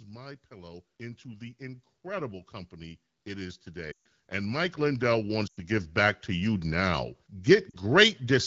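A speech recording carrying two faults. From 0.07 s to 6.57 s automatic gain rising lifts voice and background together by about 19 dB, as the gain control keeps judging the input too quiet; on a waveform the envelope widens steadily, and a spectrogram brightens evenly across all bands. Lost AMR speech frames cause dropouts at 3.91–4.02 s, 5.47–5.60 s and 7.70–7.75 s. In each, the decoder repeats its last good settings at falling gain, so the sound drops to near silence within two frames before returning rough. These appear as short, fading gaps in the spectrogram and as tapering notches in the waveform, against the lightly coded AMR-WB signal at 12.65 kbit/s.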